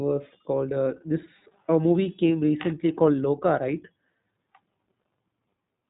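From start to finish, the speech carries iLBC codec damage, and it is plainly audible. Nothing passes above 3.8 kHz, so the sound is muffled and thin. Each short frame is coded on its own, which fits 20 ms frames at about 15.2 kbps. The result sounds rough and slightly synthetic.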